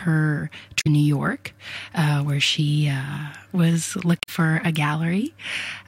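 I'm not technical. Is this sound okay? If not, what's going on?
No. Part of the compressed file is damaged, so this is damaged data in a compressed stream. Some of the stored information was lost or scrambled, and when the player reaches those spots it can't make sense of them and has to hunt for the next readable piece. You hear this as two short glitches, each about a tenth of a second: one from 0.77 to 0.87 seconds, and another from 4.19 to 4.29 seconds.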